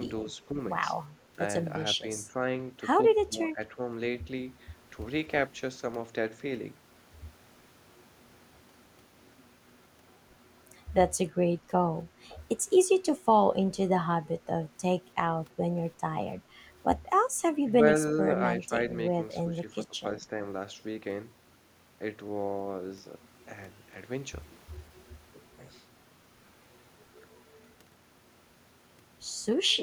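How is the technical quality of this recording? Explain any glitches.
The speech has short level dips consistent with speech suppressed in double talk, at 0.51, 2.01, 2.25, 3.26, 18.63, 19.5 and 20.16 s. They likely come from an echo canceller mistaking near-end speech for echo. Most dips last under a quarter of a second and drop 5 to 10 dB, while the 3.26 to 3.79 s dip goes about 15 dB deep.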